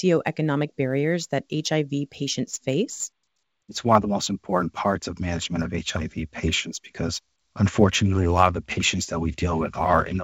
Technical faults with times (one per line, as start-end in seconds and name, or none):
0.00-10.23 sample clock jitter